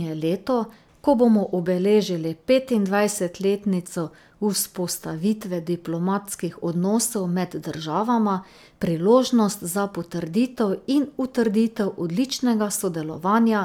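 No technical faults can be heard anywhere in this speech recording.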